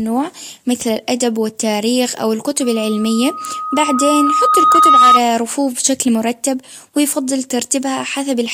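Just after "مثل الأدب والتاريخ أو", at 2.62 s, a loudspeaker feedback squeal begins: a steady tone at 1.2 kHz that swells over roughly two seconds until it sits about 10 dB above the speech. The microphone is picking up the loudspeaker it feeds, and at that frequency the loop gain exceeds unity, so the tone reinforces itself on every pass. It persists until 5.21 s, ending just before "رفوف بشكل مرتب ويفضل".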